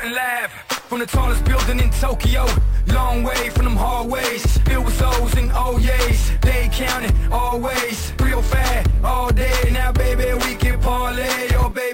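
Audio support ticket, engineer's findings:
Imaging from sample-and-hold upsampling, throughout. Metallic fizz from 11.03 to 22.05 kHz, about 23 dB below signal. Samples repeated without a smoothing filter, which fits a 22 kHz to 44.1 kHz conversion.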